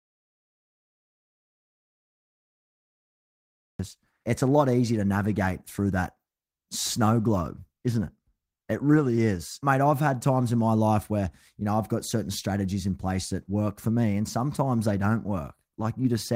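The speech starts in an audio dropout to silence that is already under way: from 0.0 to 3.79 s the track holds silence, most likely because the input was lost while the recorder kept writing. Unlike a natural pause, there is no room tone or faint hiss; the signal is simply absent until speech breaks in mid-flow at "it's a lot easier".

Shortly after "a lot easier to", a call bitrate drop takes hold from 5.17 to 9.45 s. The encoder's budget falls from 32 to 18 kbps and stays at the low rate for about 4.2 s. The audio turns coarse and watery, and the upper frequencies are trimmed, leaving it muffled. What separates this from packet loss is continuity: nothing goes missing or stutters. The whole stretch is simply coded more crudely, then clears when the rate recovers.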